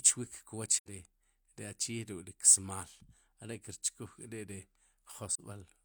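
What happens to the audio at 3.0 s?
Nothing goes wrong at 3.0 s; the speech plays through that moment intact, with no dropout, click or other fault.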